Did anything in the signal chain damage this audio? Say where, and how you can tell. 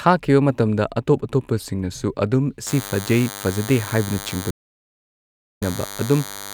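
Yes, two stages left marks. At the analogue wiring stage, a DECT cordless phone buzz appears at 2.67 s and runs to the end of the clip. It is a thin, rasping tone with a 100 Hz repetition and a dense stack of harmonics, sitting about 15 dB below the speech. A DECT handset or base nearby transmits a burst every 10 ms, and the audio circuitry rectifies that radio energy into this buzz. Mains hum would be a smoother 50 or 60 Hz tone without the same spiky harmonic texture.

At the network stage, a stream reconnect breaks the audio at 4.51 s. The result is about 1.09 s of dead silence, until 5.62 s. When sound returns, it picks up roughly 0.7 s further along than where it stopped, so that stretch of speech is simply gone. The connection dropped, and the player reconnected and restarted decoding mid-stream. A packet-loss glitch would be brief and concealed, not a full second of silence followed by a jump forward.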